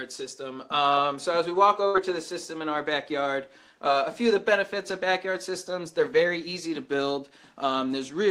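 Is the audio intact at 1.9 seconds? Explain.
No. A burst of packet loss runs from about 1.87 to 1.97 s: several consecutive packets were lost or arrived too late to play. The receiver filled roughly 65 ms by extending the last received sound and fading it down, so the sound holds unnaturally and dies away instead of moving on. When playback resumes, about 60 ms of the original audio is simply gone, leaving a small jump.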